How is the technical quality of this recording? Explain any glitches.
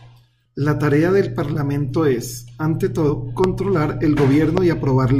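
The recording has two kinds of glitch, each heard twice: short skips in the speech and two sharp pops.

Compressed frames skipped, at 0.45 s and from 3.09 to 3.12 s just after "es ante": several whole compressed frames never reach playback, so the speech leaps ahead by roughly 70 ms, about four frames of 20 ms each. Each join is heard as a sudden jump forward in the speech.

Loud pop, from 3.44 to 3.46 s and from 4.58 to 4.60 s: a single sharp pop each time, peaking roughly 15 dB above the speech, which continues underneath. It is likely a voltage spike from a plug, switch, static discharge or driver glitch, shaped by the downstream circuitry.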